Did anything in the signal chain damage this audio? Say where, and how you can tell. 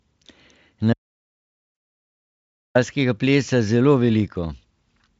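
Yes. At the storage or capture end, there's an audio dropout to silence from 0.93 s to 2.75 s. The speech cuts off mid-flow and about 1.8 s of flat digital silence follows, with no room tone or hiss underneath, before the audio resumes just as abruptly. Silence like that means the input feed vanished while the recorder kept writing samples, most likely a lost device or link, or a stray mute.

On the network side, there are two short spots of VoIP packet loss concealed by the speech codec. The first, at 1.75 to 1.77 s, lands inside the silent stretch, so there's nothing to hear of it. The second, at 3.45 to 3.48 s, is audible as a brief stretched, fading sound where the decoder stretched its last pitch and filter state over a gap that fits one missing 20 ms frame, then took a moment to recover. The Speex coding itself sounds clean enough, which fits a fairly high-quality setting.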